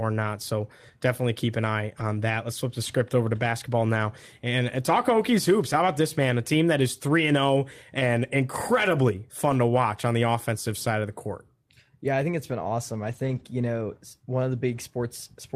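At 1.99–2.01, 3.49–3.51, 9.49–9.55, 12.99–13.41 and 14.71–14.77 s, lost packets are rebuilt from error correction. Low-bitrate backup copies fill each hole, so nothing drops out, but the speech turns briefly rough and noisy, longest in the 0.22 s stretch around 13 s.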